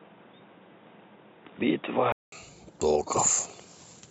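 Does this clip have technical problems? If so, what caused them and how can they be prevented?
Yes. From 0.00 to 2.32 s the speech is dull and boxy, with nothing above 3.8 kHz and a faint added noise floor, at roughly the same level. A 200 ms silence marks the switch at 2.32 s, where full bandwidth returns. This is likely an input switched to a poorer device. Fixing the recording input in the system settings and disabling automatic device switching prevents it.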